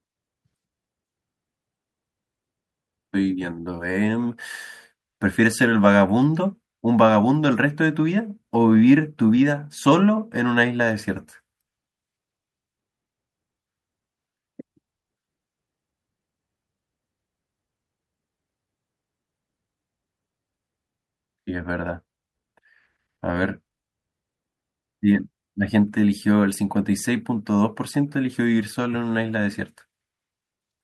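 No technical faults are audible.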